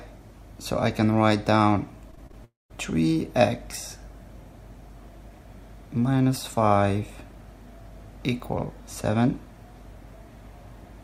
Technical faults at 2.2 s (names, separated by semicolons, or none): repeated packet loss (robotic sound)